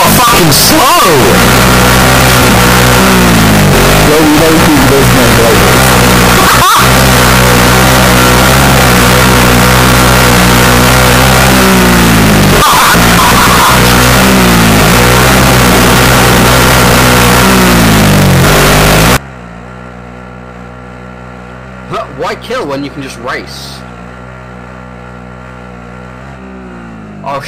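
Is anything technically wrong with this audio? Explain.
Yes. From 0 to 19.17 s the audio is a float read as integer: harsh, near-square, very loud at an almost fixed, high level, with background noise as loud as the foreground yet pitch still traceable. Likely 32-bit float samples read as 32-bit integers, so sign and exponent bits dominate. Unlike ordinary clipping, quiet passages blast too.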